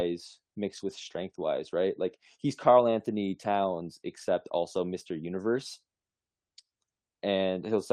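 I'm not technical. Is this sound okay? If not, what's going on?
No, not quite. It's speech with three spots of lost packet rebuilt from error correction: 0.77 to 1.15 s, just before "wise right"; 2.83 to 2.93 s; and a brief moment at 4.89 s, right after "except also". Bits of the stream went missing, and the player filled them from rougher backup copies. There's no silence, but those moments sound grainier and noisier.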